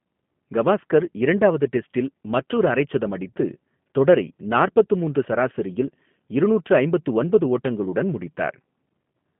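Speech runs through a G.729 codec for its whole length, with plainly audible damage: the sound is slightly rough and synthetic, confined to a 150 Hz to 3.4 kHz telephone band with nothing above 3.5 kHz. That fits an 8 kbit/s G.729A coder rebuilding each frame from a vocal tract filter, pitch predictor and sparse pulses.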